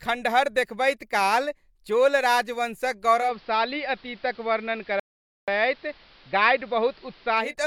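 At 3.16 s, just after "देखबैत काल चोल राजवंशक", the receiver loses its digital signal and performs a digital radio blending to analogue, cross-fading over about 196 ms to the station's AM broadcast. The speech goes dull, and a steady hiss appears roughly 30 dB under the voice. The loudness stays the same, so the change is heard as lost treble and added noise. The AM sound lasts until 7.55 s.

From 5.00 s to 5.48 s, inside the AM stretch, the speech stops in mid-flow and the output goes silent for about 0.48 s before resuming. This playback stall likely comes from the player running short of data or its playback thread being held up, so nothing reaches the output for that half-second gap.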